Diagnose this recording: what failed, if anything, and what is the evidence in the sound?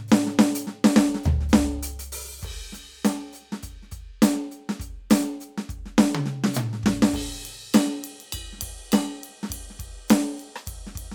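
Nothing failed; the music shows no fault at any stage.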